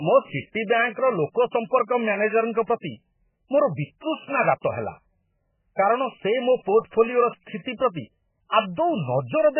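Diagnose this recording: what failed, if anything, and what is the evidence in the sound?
The codec stage failed. Throughout the speech nothing survives above 3 kHz, and the band that remains sounds heavily damaged: watery, swirling texture where weak frequency lines drop in and out between frames, with sibilants turned to metallic chirps. Likely cause: MP3 compression at a very low bitrate, in the region of 8 kbps. A simple low-pass filter or narrowband channel would cut the treble just as cleanly but would leave the remaining band steady rather than churning.

At 4.61 s a short hiss arrives about 24 ms ahead of a sharp onset, and the attack itself sounds softened. This is pre-echo, also from the codec stage. The transform spreads quantisation noise across its whole block, so noise scaled for the loud attack leaks into the quiet moment just before it. Unlike a click or dropout, it sits only in front of the transient, never after it, and carries no discontinuity.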